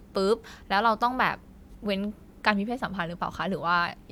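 No technical faults can be heard anywhere in the speech.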